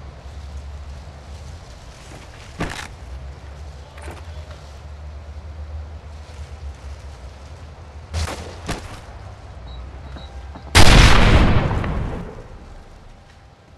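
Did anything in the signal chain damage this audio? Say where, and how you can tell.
Yes. A sudden gain jump occurs at 8.14 s, where the level rises by about 12 dB until 8.26 s, and again at 12.21 s, where it drops by about 6 dB and stays down to the end. The sound and the background noise step together, with no fade. That points to a digital gain stage, likely a setting or bit shift applied in the driver or processing path from one sample to the next, without a ramp.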